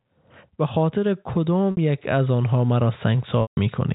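At 1.71 s the speech briefly freezes into a held, buzzy tone for 60 ms. At 3.42 s a 150 ms hold fades to silence before the speech cross-fades back in at 3.57 s. This is packet loss with pitch repetition: the receiver bridged each gap by repeating the last pitch period and fading it out.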